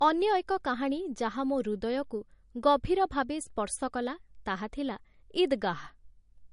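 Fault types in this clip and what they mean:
Low-bitrate audio saved at a high bitrate: The speech has nothing above 10.6 kHz throughout. That cut-off fits an MP3 near 42 kbit/s, likely later re-encoded as a 320 kbit/s MP3. The larger file cannot restore the missing top band or remove the earlier coding damage.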